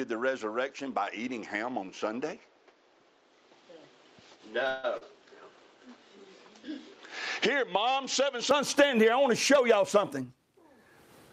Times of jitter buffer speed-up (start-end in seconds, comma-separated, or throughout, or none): 9.57-10.61